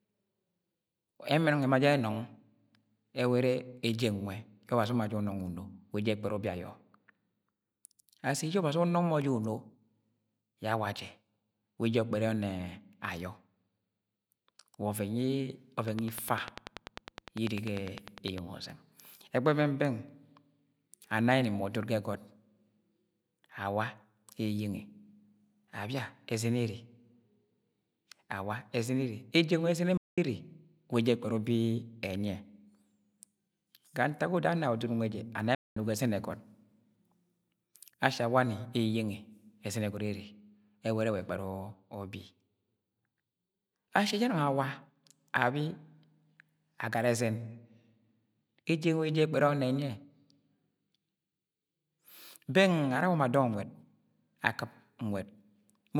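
From 15.88 s to 18.39 s, a train of clicks runs over the speech. The pulses come at a steady 10 per second, around thirty in all. Each has much the same sharp shape. They peak well above the level of the speech, so they stand out as a hard, even ticking. Some pulse source is firing repeatedly into the signal path, likely interference from nearby equipment or a faulty connection or power supply.

At 29.97 s, a playback stall cuts the speech off mid-flow. It stays silent for 0.20 s, then resumes. A second playback stall follows at 35.55 s. This gap lasts 0.21 s. Both sound like abrupt holes, not fades. The player likely ran out of buffered data or had its output thread blocked, and it produced nothing until it caught up.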